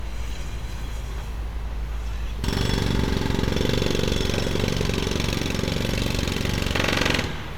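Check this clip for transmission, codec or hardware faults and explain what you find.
No transmission, codec or hardware faults can be heard anywhere in this recording of sounds. Nothing in the audio calls for further explanation.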